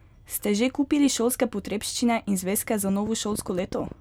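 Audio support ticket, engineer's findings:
Train of clicks, 2.89–3.93 s: about ten same-shaped pulses, irregularly spaced near 10.7/s, a few dB above speech. Likely interference or a faulty connection or power supply. Repeated similar pulses, unlike random crackle.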